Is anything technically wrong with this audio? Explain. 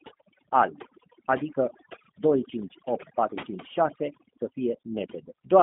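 Yes, two faults affect the whole speech clip.

Throughout, overdone noise removal is audible. Bands near the noise estimate are pushed toward silence, leaving a lowered background that breaks up into twinkling specks.

Throughout, there is G.729 codec damage. The speech sounds plainly rough and synthetic, which fits 8 kbit/s G.729, with the band limited to about 200 Hz–3.6 kHz and nothing above 3.7 kHz.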